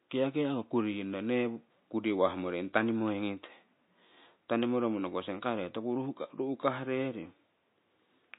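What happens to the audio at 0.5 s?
At 0.5 s, as throughout the clip, likely MP3 compression at a bitrate fitting 24 kbps drops weak frequency lines frame to frame, giving plainly audible watery, swirly smearing.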